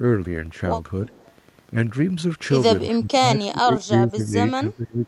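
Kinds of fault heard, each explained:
Wi-Fi interference: a nearby Wi-Fi radio's beacon is being rectified by the audio circuitry, so you get a faint tick roughly ten times a second, spaced 102.4 ms apart, running under the whole clip at a low level, maybe 30 dB below the speech.
Echo leak: from 1.07 to 1.29 s there's a delayed copy of the speech, about 360 ms behind and very quiet, around 30 dB down. Most likely the far end's echo canceller didn't fully scrub its loudspeaker pickup and sent a scrap back.
Speech suppressed in double talk: the speech dips in patches between 2.88 and 4.35 s, about a second in total, and again between 4.53 and 5.04 s, roughly 400 ms, dropping as much as 20 dB. Likely the echo canceller clamped down while both sides talked.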